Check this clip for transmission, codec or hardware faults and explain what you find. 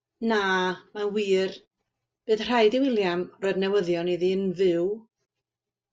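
Nothing stands out in this speech recording, so there's no fault to report here.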